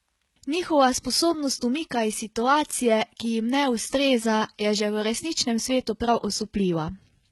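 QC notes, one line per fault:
Throughout: HE-AAC compression. The treble in the speech sounds bright yet synthetic, and s sounds are gritty and metallic. The likely cause is heavy coding near 16 kbps, where only the lower band is coded. The top is copied up from it under a coarse envelope, so harmonics misalign.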